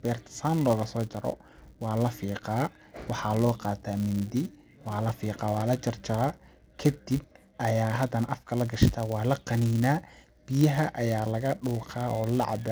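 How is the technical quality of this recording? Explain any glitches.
The recording has one persistent technical fault, a filter restarted on every block, running for the full length of the speech.

Throughout the clip a buzz at about 188 Hz sits under the voice. It rises and falls with the speech level. The filter loses its stored state at each block boundary and restarts from zero, so every block opens with a small transient. Those transients repeat at the block rate, which fits a 256-sample block.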